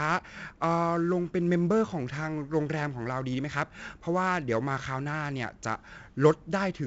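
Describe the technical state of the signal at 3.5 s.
Gritty hiss tracks the speech level at 3.5 s, with roughened attacks and nothing above about 7.7 kHz. This is heavy 4-bit ADPCM compression, present throughout: coarse adaptive steps from a prediction, with bandwidth that fits a 64 kbps, 16 kHz stream.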